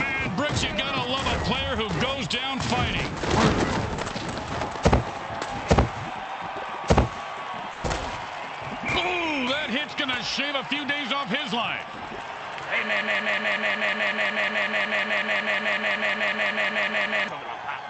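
From 7.72 to 7.86 s the last sound is stretched into a held, fading tail for about 120 ms, then the audio jumps ahead with that stretch missing. This is a burst of packet loss: the receiver concealed the gap by extending and decaying what it last had.

From 13.01 to 17.28 s a fragment of about 0.18 s repeats exactly, back to back, 23 times, replacing whatever should have played. This broken-record loop likely comes from a stalled player, encoder or stream resending its last buffered piece over the call's Opus path, whose response stops at about 8 kHz.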